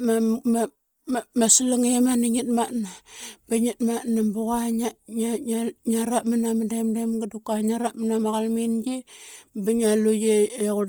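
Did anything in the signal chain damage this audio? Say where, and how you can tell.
Yes. Bluetooth LC3 compression damages the speech throughout. The top end is grainy and breathy, with noise standing in for real upper detail, though the band still reaches about 20 kHz. This is likely LC3 at roughly 32 kbps with 10 ms frames, zeroing and noise-filling the upper spectrum.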